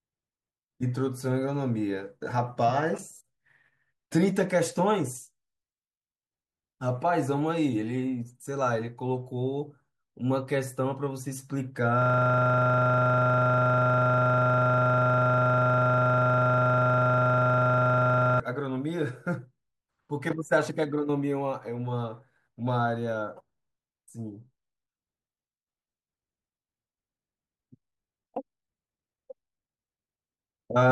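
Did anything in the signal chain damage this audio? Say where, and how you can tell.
Yes. A system hang loop at the driver or buffer stage: from 12.02 to 18.4 s, one 40 ms slice of the speech repeats identically about 160 times, giving a steady 25 Hz buzz. Packet-loss concealment would vary and fade, but this repeats sample-for-sample, because the hardware kept replaying a frozen ring buffer.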